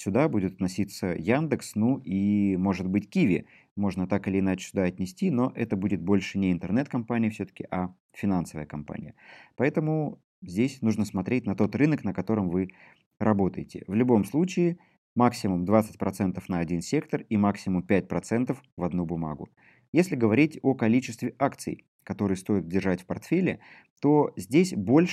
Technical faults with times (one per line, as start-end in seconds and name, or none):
none